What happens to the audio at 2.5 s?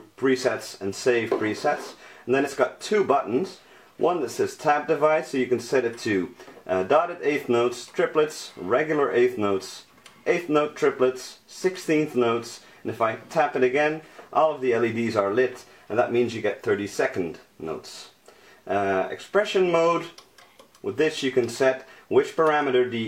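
Compressed frames skipped at 2.42 to 2.48 s: missing or rejected frames drop about 50 ms, so the audio jumps ahead.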